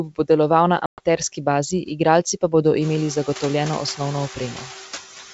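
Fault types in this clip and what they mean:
Noise suppressor artifacts: The background sinks between phrases and swells back under the speech. This is most noticeable after the room noise rises by about 19 dB near 3 s. A frame-by-frame suppressor is lowering each frequency band it judges to be steady noise by about 7 dB. Because those decisions shift constantly, the residue pumps instead of staying even.
Packet loss on an ADPCM call: From 0.86 to 1.00 s there is an abrupt, hard-edged silence, roughly 120 ms of missing audio. That length fits around ten lost packets replaced with silence. The call otherwise uses 64 kbit/s G.722 wideband. G.722 codes the waveform adaptively, so after a gap the receiver's predictor and step size no longer match the sender's. The returning audio has to pull that decoder state back into line.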